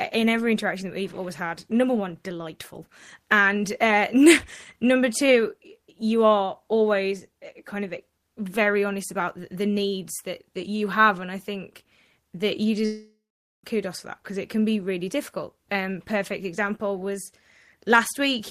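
At 12.85 s the speech smears into a fading buzz, then falls silent for about half a second before returning at 13.64 s, likely a long network dropout losing 0.78 s.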